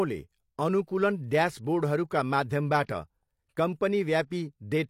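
Speech, with one fault: pre-echo. From 2.83 to 2.89 s, a hiss rises just before a sharp attack. It lasts about 55 ms. The attack itself sounds blunted and smeared. This is a transform codec artefact. The codec set its noise level for the loud part of a block. That noise was then spread across the whole block. So it also covered the quiet stretch just before the onset.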